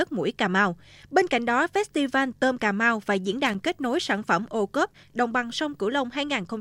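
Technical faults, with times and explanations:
3.46–3.55 s, loose connector crackle: a short, ragged burst of scratching and crackle breaks into the speech for under a tenth of a second, uneven rather than a single clean click. It comes from a worn or dirty contact in the cable or jack that briefly loses and regains connection as it shifts, chopping the signal on and off in quick succession, while any DC present on the line turns each break into a pop.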